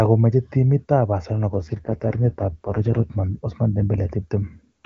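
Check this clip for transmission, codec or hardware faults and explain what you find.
There is one fault, an AMR rate drop. From 1.48 s to 3.18 s the speech turns rough and synthetic, then clears again. The weak-link codec rate fell, which fits a step from 23.85 to 6.6 kbit/s. Fewer bits went to the voice and more to error protection. The band stays full and there is no gap.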